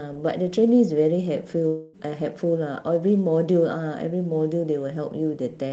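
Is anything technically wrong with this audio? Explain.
Yes. A long network dropout runs from 1.67 to 1.95 s. About 0.26 s of audio likely never arrived, and the receiver covered the gap by extending the last sound into a fading buzz before the sound resumes. The call codec also limits the audio to below 8 kHz.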